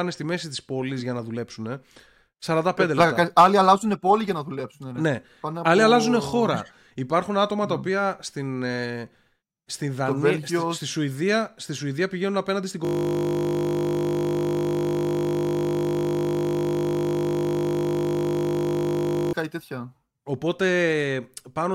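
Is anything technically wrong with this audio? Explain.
Yes. From 12.85 to 19.33 s, a system hang loop repeats one 20 ms piece of the speech hundreds of times. The frozen system leaves the playback buffer cycling, producing a steady 50 Hz buzz.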